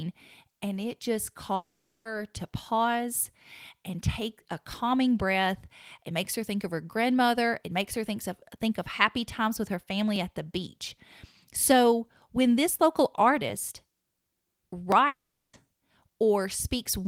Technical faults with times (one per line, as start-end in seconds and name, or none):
1.55-2.07 long network dropout
10.16 dropped samples
14.92 dropped samples
15.07-15.55 long network dropout